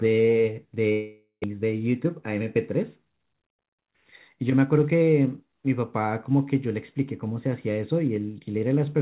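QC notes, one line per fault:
0.92–1.46 s, long network dropout: the speech stops arriving and the last sound is stretched into a fading buzz for about half a second, then about 0.11 s of near silence. Speech resumes with roughly 0.4 s missing, likely from lost packets.
1.53–2.56 s, jitter buffer speed-up: the speech plays about 6% fast at unchanged pitch and sounds slightly hurried. After the delay built up across the gap, short pitch-period pieces totalling around 70 ms are trimmed out repeatedly to cut the backlog.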